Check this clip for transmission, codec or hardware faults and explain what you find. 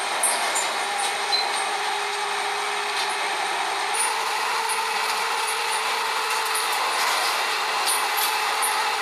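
One fault turns up: a wrong sample rate, from 3.95 s through to the end. From that point the sounds run about 9% faster and sit roughly 1.5 semitones higher, so everything feels slightly hurried and brightened, with pitch and tempo lifted together. The cause is samples played back at a higher rate than they were captured at, with no rate conversion in between. The 1.09 ratio fits 44.1 kHz material being played at 48 kHz.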